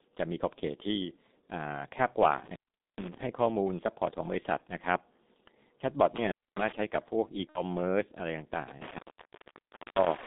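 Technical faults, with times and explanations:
Throughout: G.723.1 codec. Heavy low-rate coding at 6.3 kbit/s confines speech to 200 Hz–3.7 kHz, sounding muffled and hoarse with smeared consonants.
2.31–3.23 s, 6.16–6.72 s, 8.68–10.27 s: intermittent contact. A loose connection drops the sound for about 0.43 s, 0.26 s and 0.98 s, with crackle at the edges.
4.58–4.62 s and 7.49–7.62 s: VoIP packet loss concealed by the speech codec. The decoder fills the gaps, about 30 ms and 60 ms, with a fading extrapolation of the last voice, a buzzy tone or coloured noise. Speech then recovers weakly.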